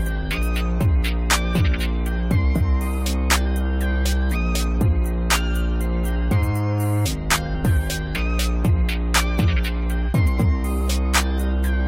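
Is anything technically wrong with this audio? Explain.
Yes. Damaged data in a compressed stream shows up at 7.54 s. At that point part of the encoded data arrives corrupted, so the decoder cannot read those frames properly, loses its place in the bitstream and has to hunt for the next valid frame header before normal decoding resumes. The result is a single very short glitch, around 10 ms, heard as a brief chirp or blip cutting across the sound.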